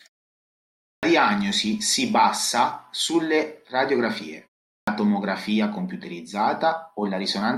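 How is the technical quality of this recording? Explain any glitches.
The main glitch is a clipped start after a pause, at 0.92 s and again at 4.77 s. The output path has dozed off during the silence, so it wakes about 110 ms late and shaves the opening off "diagnosi si bassa sulle" and off what follows "si bassa sulle radiografie". The speech snaps in abruptly, missing its first sounds.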